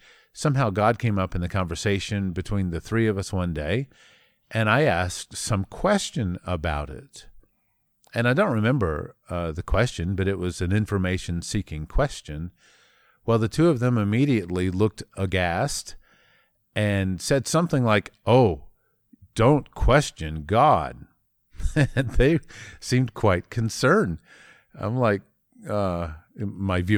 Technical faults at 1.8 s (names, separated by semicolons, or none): none